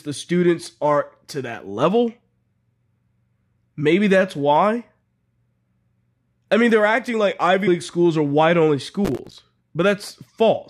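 At 7.66 s the speech jumps forward. This is compressed frames skipped. Some frames of the coded audio were never played, either missing from the stream or rejected by the decoder as damaged. Roughly 70 ms of sound is lost in one step. The speech resumes slightly ahead of where it left off.

From 9.05 s to 9.39 s a gritty tearing rides on the speech. This is processor overload crackle. The processor could not finish its small audio buffers in time, and missed a run of deadlines back to back. Each miss was filled with silence, leaving a tiny hard-edged hole, which fits buffers of about 5 ms. Around twenty such holes crowd together, so they merge into crackle. It stops once the load eases.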